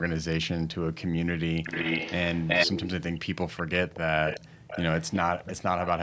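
From 1.63 to 2.89 s, an echo leak sends the speech back 378 ms late, about as loud as the original. Fainter, fading scraps return at 4.26–4.4, 4.67–4.83, 5.0–5.19 and 5.39–5.53 s. A loudspeaker's echo canceller likely failed to remove them.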